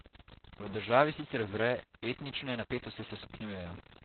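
Stuck bit, throughout: a distortion rides on the speech and fills the pauses with noise, most likely from one data bit held at a fixed value.

Opus voice compression, throughout: nothing is left above 4.3 kHz, and heavy coarse coding leaves the speech muffled, hoarse and slightly robotic, which fits narrowband SILK at around 8 kbps.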